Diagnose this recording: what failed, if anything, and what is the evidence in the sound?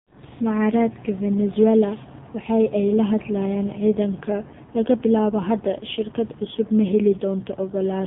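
The codec stage failed: the whole clip has gone through the AMR narrowband mobile codec. Nothing sits above 4 kHz, and the speech sounds heavily buzzy and synthetic, with the vocal-tract model starved of pulses. That fits a low AMR-NB mode of around 5.9 kbps.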